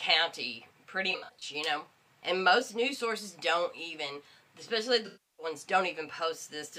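AAC frame loss with concealment appears at 1.11–1.43 s and again at 5.06–5.46 s. In the first patch, about 170 ms of data drops out in scattered gaps over roughly 300 ms, the longest around 70 ms. The decoder fills each hole by reusing the last good spectrum, which leaves a smeared, noisy texture. The second loss totals 320 ms, so the same concealment has to cover much more missing audio.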